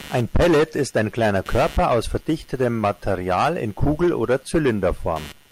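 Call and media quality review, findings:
Computer activity noise, present for the whole clip. Buzzing, chirping texture under the speech, pulsing at around 150 Hz. Level roughly 25 dB below the speech. Follows the machine's load, not the talker; persists through pauses. Probable component: analogue input sharing ground with the host computer. Mechanism: processor, graphics or mouse load swings shift the common ground, and the audio circuit picks it up.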